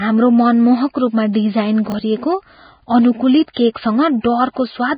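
Speech, running about 5 seconds, with a constant band-limited, grainy quality: there's nothing above 4.9 kHz, the top end that remains is hissy, and voiced sounds come across roughened rather than clean. That combination points to heavy codec damage, most likely Vorbis compression at a very low bitrate, somewhere in the region of 15 kbps. At that setting the encoder lowers its cut-off and quantises what's left of the treble so coarsely that fine detail gets replaced by noise of similar energy. You'll also catch pre-echo on three attacks, at 0.94 s, 1.33 to 1.35 s and 3.53 to 3.57 s, where a short hiss creeps in ahead of each onset, spreading about 12 ms, 20 ms and 32 ms respectively. That's the transform block smearing its quantisation noise evenly across the whole block, so noise sized for the loud attack leaks into the quiet moment just before it, and those onsets sound a bit soft and blurred as a result. 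Then between 1.90 and 1.94 s there's a brief jumbled moment caused by chunks out of order. The sound is consistent with a 20 ms piece of audio landing one chunk late and playing after the piece that should follow it. Nothing is actually missing, but the shuffled order puts hard joins into the waveform.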